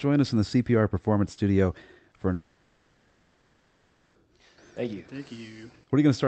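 A speech clip where, from 2.33 to 4.17 s, the sound smears into a fading buzzy hiss before speech resumes with the intervening stretch gone. This is likely a long network dropout: the receiver concealed about 1.8 s of lost audio over an Opus call path limited to 8 kHz.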